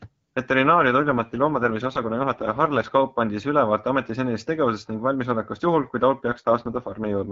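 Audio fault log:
0.98–2.92 s and 6.28–7.32 s, AMR rate drop: the network pushed the wideband AMR codec to a lower rate to protect a weak link, so the speech turns rough and synthetic with no gap or band loss. The grain fits 6.6 kbit/s, down from the 12.65 kbit/s HD Voice level heard elsewhere.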